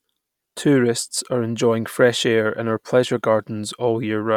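No faults can be heard anywhere in this speech recording.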